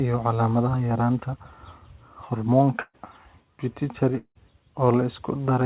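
Speech heard through a narrowband call path with nothing above 4 kHz, which fits G.711 mu-law. At 2.8 s the last sound is carried on and fades for roughly 130 ms, then about 40 ms of near-silence before speech picks up at 2.95 s with about 140 ms gone. This is a burst of packet loss, where the receiver stretched and faded the last audio to cover the gap. From 4.17 to 4.37 s a similar fading fill runs longer, about 180 ms, ending in about 80 ms of silence, and roughly 180 ms of speech never returns. The likely cause is a long network dropout, with concealment running out before the stream resumed.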